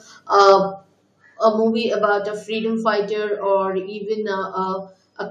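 From 0.40 to 0.53 s the loudest syllables take on a harsh, crackling edge, with peaks pushing about 2 dB past the converter's limit and a few percent of samples flattened. This points to microphone overload, likely from input volume set so high that the converter cut off the waveform tops.

At 1.02 s the voice and background drop suddenly by about 3 dB, and at 2.04 s they drop again by about 2 dB. This sounds like the microphone volume stepped down, likely by call software reacting to the earlier clipping and lowering the input volume in single jumps.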